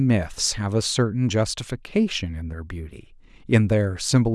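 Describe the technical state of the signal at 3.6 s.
At 3.6 s the speech signal is intact, with no audible fault at that point.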